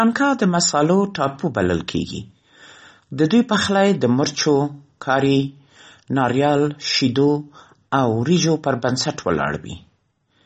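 The whole recording was likely squeezed through MP3 compression at a bitrate too low for the material; the damage is consistent with roughly 32 kbps. Short of bits, the encoder discarded everything above 8.3 kHz and dropped weak frequency lines that flicker in and out between frames. Throughout the speech this is plainly audible: the top end is dull and cut off, s sounds lose their crispness, and a watery, swirling texture hangs around the voice.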